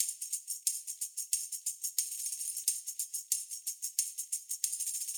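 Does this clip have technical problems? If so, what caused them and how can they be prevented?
No, nothing here points to a technical problem, so there's nothing that needs fixing or preventing.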